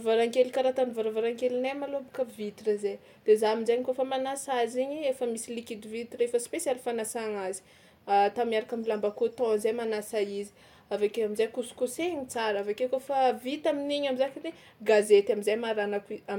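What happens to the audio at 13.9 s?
Nothing goes wrong at 13.9 s; the speech carries on cleanly through that moment with no dropout, click or distortion.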